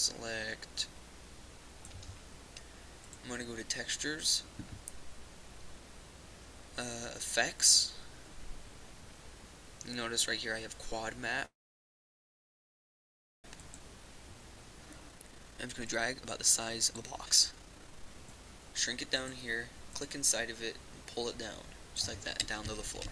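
At 11.45 s the audio stalls for about two seconds, a call audio freeze that likely comes from delayed packets draining the jitter buffer, leaving a brief fading tail then near-silence. From 13.55 to 19.07 s comes a jitter buffer speed-up: tiny pitch-period slices get cut, running things about 136% fast at unchanged pitch, clawing back roughly two seconds.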